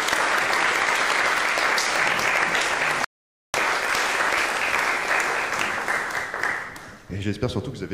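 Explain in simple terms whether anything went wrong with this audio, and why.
At 3.04 s the audio drops to silence for about half a second, then resumes at 3.54 s exactly where it left off: a rebuffering stall.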